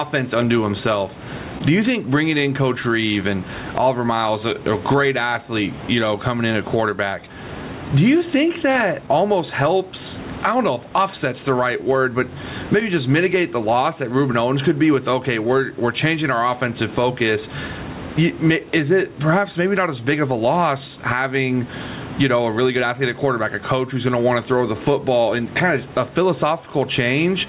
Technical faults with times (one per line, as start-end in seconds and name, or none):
0.00-27.49 gain pumping
0.00-27.49 clock drift between sender and receiver
0.06-27.47 repeated timing corrections
7.67-10.60 scattered short gaps
12.80-14.97 scattered short gaps